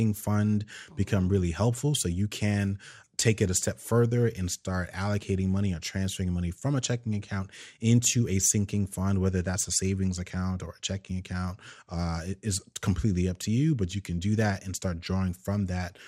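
A speech recording carries MP2 compression damage from start to finish, and it is plainly audible. The top of the spectrum sounds dull, with upper sub-bands dropping in and out, and what remains has a gurgling, granular roughness from coarse quantisation. The likely cause is MPEG Layer II encoding at too few bits, which fits a rate around 80 kbps, so high bands are switched off rather than coded.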